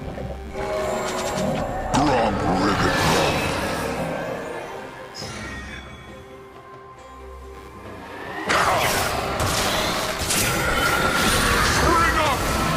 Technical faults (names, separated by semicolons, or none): computer activity noise